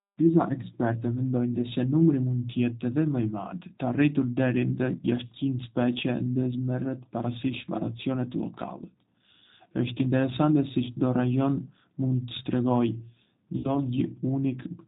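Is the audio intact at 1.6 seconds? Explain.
No. Around 1.61 to 1.66 s, a VoIP packet loss was concealed by the speech codec. About 30 ms of audio failed to arrive, which fits a single lost packet. The decoder filled the gap by carrying forward its last pitch and vocal-tract filter and lowering the gain frame by frame. The sound there smears into a stretched, fading buzzy tone or coloured noise. Because each frame builds on the one before, the voice stays weakened briefly after real packets resume.

That moment also carries the G.729 codec damage heard across the whole clip, which fits G.729A at 8 kbit/s. The codec rebuilds speech from a vocal-tract filter, a pitch predictor and a few pulses per 5 ms half-frame, and passes nothing above 4 kHz. The audio therefore sounds band-limited, rough and somewhat synthetic, and the damage is plainly audible.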